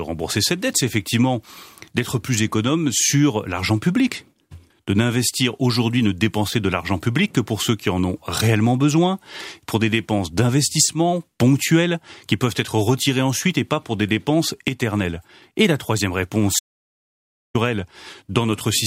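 At 16.59 s, just after "la troisième réponse", the speech drops out to silence until 17.55 s, roughly 0.95 s with no room tone. This is an audio dropout to silence, likely from a momentary loss of input while recording continued, and the speech in that gap is lost.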